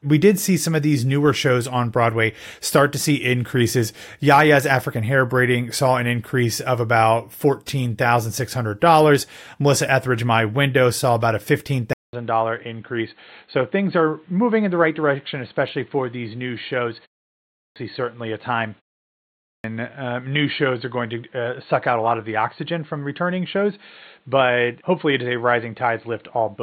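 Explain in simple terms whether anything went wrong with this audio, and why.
At 11.93 s the sound goes dull and boxy after a short 0.2 s gap, and stays that way: likely an input switched to a poorer device, cutting everything above 4.4 kHz. Then there's a clipped start after a pause at 17.29 s and 19.16 s. The output seems to doze off in the silence, swallowing roughly half a second each time.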